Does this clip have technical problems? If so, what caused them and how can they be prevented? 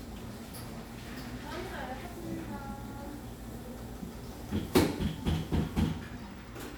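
No, I hear no faults.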